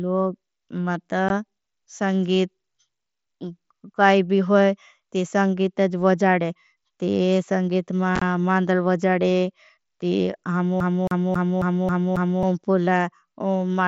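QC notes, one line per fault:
1.29 s and 8.16 to 8.22 s, unconcealed Bluetooth headset packet loss: voice packets dropped between headset and phone leave silent holes with hard edges, about 15 ms at 1.29 s, then 37.5 ms spread over 60 ms (longest gap 22.5 ms), which fits two and then five lost frames on the mSBC link.
10.80 to 12.43 s, CD stuck on one turn: a scratch keeps throwing the laser back one track, so the same 0.27 s of audio plays six times, each restart marked by a brief mute, giving the quick, evenly spaced stutter of a skipping disc.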